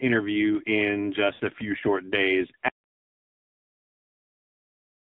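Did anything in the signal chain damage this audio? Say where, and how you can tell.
Yes. AMR narrowband mobile codec damage runs through the whole speech clip, at the codec stage. The band is confined to roughly 150 Hz to 3.6 kHz, and the voice sounds heavily buzzy and synthetic, which fits a low AMR-NB mode around 5.9 kbps, where few excitation pulses drive the vocal-tract model.

Lost AMR speech frames occur from 1.34 to 1.42 s, at the network stage. About 60 ms of sound gives way to a smeared, fading warble as the decoder repeats its last good pitch and filter settings at falling gain, which points to three consecutive frames failing their checks.

Audio dropout to silence begins at 2.69 s and lasts to the end. The sound cuts off mid-flow into silence with no room tone, so the input feed was lost while recording continued, likely through a disconnected device or failed link upstream of the encoder.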